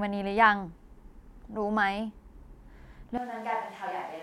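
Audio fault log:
3.18 s to end: switch to a distant microphone. The speech suddenly turns roomy and hollow, about 10 dB quieter and bass-light, with room noise only some 25 dB down. The close microphone likely dropped out. The waveform steps down, and the spectrogram thins at the low end over a raised noise floor.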